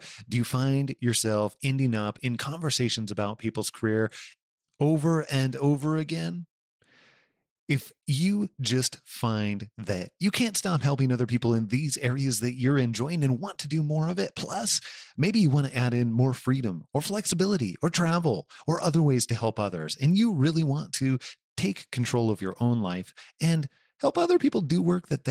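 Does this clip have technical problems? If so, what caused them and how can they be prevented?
Yes. The speech carries Opus voice compression the whole way through, and the damage is plainly audible. Top end is still there, which fits hybrid mode: a linear-prediction coder handles the body of the voice while a transform layer patches in the band above 8 kHz on a tight budget. Coarse excitation coding gives the voice a slightly hoarse, robotic edge, consistent with a bitrate around 16 kbps. To prevent it, give the encoder more bitrate, roughly 32 kbps or higher for voice, or record and archive uncompressed before any streaming step.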